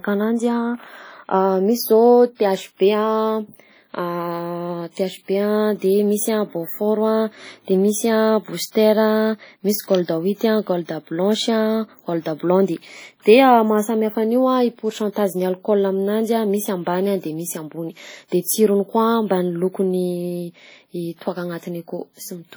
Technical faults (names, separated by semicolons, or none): WMA compression; electrical switching spike; pre-echo